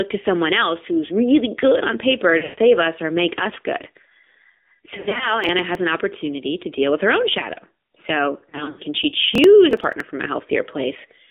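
AMR narrowband mobile codec, throughout the speech: the audio sits in a telephone band of roughly 250 Hz to 3.6 kHz, with nothing above 4 kHz, and the damage is plainly audible. At 7.4 kbps the codec rebuilds the voice from a vocal-tract model excited by a few pulses per subframe. Too few bits carry that excitation, so the voice comes out buzzy and synthetic.

Lost AMR speech frames at 2.38 to 2.59 s, 4.96 to 5.32 s and 8.50 to 8.81 s: radio errors spoiled frames, and the decoder filled each gap by repeating its last good pitch and spectral settings at falling gain. The first event loses about 180 ms, with a 140 ms run that smears the voice and fades it toward silence. The later ones, about 140 and 160 ms spread over a quarter second, sound as short warbly dips. Each time the voice returns briefly weak and rough.

Processor overload crackle at 5.44 to 5.75 s and 9.35 to 10.00 s: the processor missed a string of buffer deadlines, and the gaps fit buffers of around 10 ms. 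Each late buffer was skipped outright, leaving a tiny hard-edged hole in the sound. A handful of misses in the first burst and around ten in the second merge into gritty, tearing crackle over the voice. It stops once the load clears.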